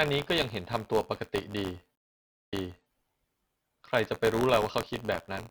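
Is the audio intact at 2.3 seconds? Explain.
No. At 2.3 seconds the sound falls inside a stream reconnect spanning about 1.95 to 2.90 s. The connection dropped, the player output nothing for 531 ms, then reconnected and started a new decoder mid-stream. Playback resumes 418 ms earlier than where it broke off, so a short stretch of sound is heard twice, entering with a soft onset as the fresh decoder's first frames come up. The 2.3 s point lies in the dead gap itself.

Buffer tearing runs through the whole clip, though it is inaudible at exactly 2.3 s because it needs signal to appear. The writing program and the playback hardware have drifted so they cross inside every period, which fits a 512-sample buffer. A small slice of each period, a few percent, carries sound from roughly 20 ms earlier, with hard joins on both sides. This gives a steady robotic buzz at 86.1 Hz wherever sound is present, including just before and after the gap.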